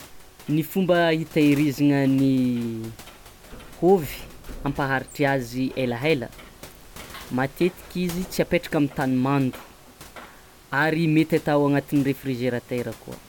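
Nothing goes wrong anywhere in the recording, and the only thing in the background is the room's own noise, sitting about 24 dB below the speech.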